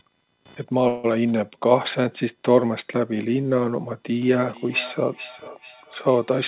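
Underneath the whole speech clip there's a faint buzz of computer activity noise, pulsing at a rate of roughly 500 Hz and sitting well below the talker. It's the machine's load shifting the shared ground of the audio circuit, so it follows the computer rather than the speech. You'll hear it wander a bit in texture while the voice carries on, all within the 4 kHz band the G.711 mu-law call path leaves.

At 0.88 s the audio hangs until about 1.06 s, a 157 ms call audio freeze. Instead of dropping out, the last bit of sound gets stretched into a short fading buzz. Then the speech picks up exactly where it stopped, so nothing is lost, but everything after that point runs 157 ms later. The likely cause is a packet delay that drained the jitter buffer, with the receiver filling the gap until data arrived.

From 4.26 s to the end, there's feedback echo between two devices. Each phrase comes back roughly every 400 ms, peaking about 16 dB below the direct speech and getting thinner and more ringing with each pass. 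What's happening is that a second device in the room plays what the first device's microphone sent, that microphone picks it up and sends it round again, and neither echo canceller catches it because each one only removes its own playback.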